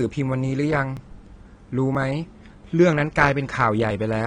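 Right from the start the speech sounds dull and a bit smeared, with nothing above about 9.8 kHz and a warbly, fizzy edge on sibilants and held sounds. That's most likely AAC compression. At a low rate the encoder trims the top end and spends too few bits on what's left, which fits roughly 32 kbps AAC-LC. The damage is plainly audible the whole way through.

On top of that there are tiny skips at 0.97, 1.95, 2.93 and 3.91 s, about once a second, each dropping a sliver of sound. There's no gap of silence. The two sides just butt together, so you hear a small jump in the speech. That regular spacing points to audio missing between chunks: the recording is handled in one-second blocks, and a short piece gets lost at each handover.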